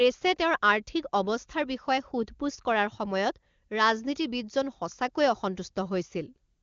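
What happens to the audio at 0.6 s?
At 0.6 s the speech comes through intact, with no dropout, click or distortion at that point, and the AMR wideband (HD Voice) coding at what sounds like its top rate of about 24 kbit/s leaves the sound clear there.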